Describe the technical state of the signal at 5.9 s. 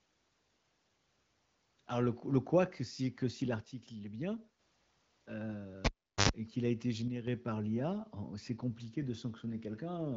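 At 5.9 s the signal is inside a cable pulled and plugged in event, running from 5.85 to 6.29 s. A pop marks the disconnection, then about 0.40 s of near silence shows as a flat waveform and an empty spectrogram. Next comes a roughly 89 ms burst of 50 Hz mains buzz, seen as stacked harmonic lines, while only the plug tip makes contact. A second pop, a vertical broadband stripe, sounds as the signal returns just before "et qu'il a été".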